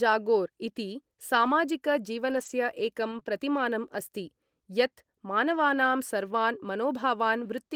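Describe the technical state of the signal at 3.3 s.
Just before 3.3 s the speech passes through two back-to-back short concealed packet losses, 3.19 to 3.23 s and 3.23 to 3.26 s, each covering about 20 ms of missing audio. The receiver extrapolated from the preceding sound, its pitch or noise shape, then crossfaded back, leaving a brief smeared wobble. A spectrogram shows a blurred, smeared patch there.

Immediately after, from 3.26 to 3.28 s, a single lost packet rebuilt from error correction plays a 20 ms low-bitrate copy carried by the following packet. There is no gap, but the frame is rougher and noisier, showing as grainier, less defined spectral detail.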